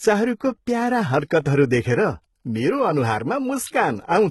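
Right through the speech there's heavy damage that sounds like HE-AAC compression at a very low bitrate, likely around 16 kbps: rebuilt, metallic treble, gritty s sounds, nothing above 11.8 kHz.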